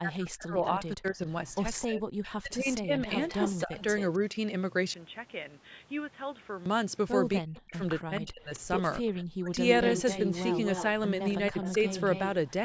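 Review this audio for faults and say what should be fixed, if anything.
Speech suppressed in double talk, 0.0 to 3.83 s, 7.4 to 9.51 s and briefly at 11.51 to 11.63 s: the speech dips and drops out in pieces, by up to about 40 dB in the first two stretches (roughly two seconds and one second affected in total) and by about 15 dB in the last. This is likely an echo canceller that, with both sides talking at once, could not separate the near talker from the loudspeaker echo and turned both down. Prevent it by tuning the canceller's double-talk detection so it keeps the near talker at full level.

Echo leak at 1.81 to 1.87 s, 3.06 to 4.17 s, 8.54 to 8.6 s and 9.77 to 12.2 s: a copy of the speech returns 262 ms late, at about 15, 10, 30 and 10 dB below the speech respectively. The likely cause is a loudspeaker on one side whose echo canceller let part of its microphone pickup through. Prevent it with a headset or better echo cancellation at that end.

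Input switched to a poorer device, 4.94 to 6.66 s: the sound turns dull and boxy. It drops about 10 dB in level and carries a new noise floor about 30 dB below the speech, with no gap at the changeover. This likely comes from the system moving mid-recording to another microphone or a headset call profile. Prevent it by locking the input device for the whole session.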